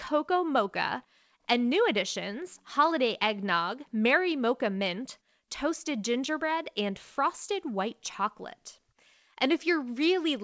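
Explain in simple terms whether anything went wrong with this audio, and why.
Nothing went wrong: the speech came through a normal WebRTC call path using the G.722 codec, which carries sound only up to 8 kHz, so the missing higher frequencies are simply how that kind of call connection works.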